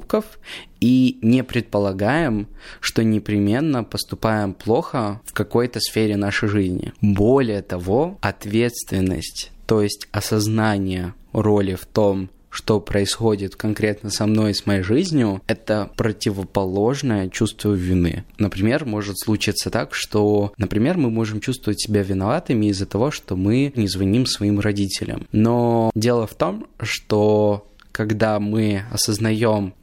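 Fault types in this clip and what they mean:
Drift correction step: Just after "жизнью это противоположное чувство", from 17.76 to 18.63 s, the speech slows by 5.5% and drops about 98 cents, nearly a semitone, with speed and pitch moving together, then returns to normal before "может случиться так что". This is likely a clock-matching stage that changed its playback rate in one step to refill or drain its buffer, a correction far larger than such adjustments normally are.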